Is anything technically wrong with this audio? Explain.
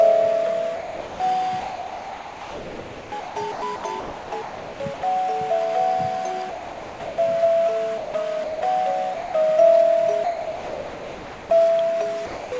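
Yes. The sound gives way to steady synthetic hiss at 0.76–1.20 s, 6.50–7.18 s, 7.98–8.14 s, 8.44–8.62 s, 9.14–9.34 s, 10.24–11.50 s and 12.26–12.52 s. This is likely sound dropped by the voice detector, with comfort noise filling each gap.

From 1.60 to 5.02 s the sound turns choppy. This is likely sound chopped by the voice detector, switching repeatedly and replacing about 2.6 s in total.

The call codec's ceiling, with nothing above 8 kHz, is present throughout.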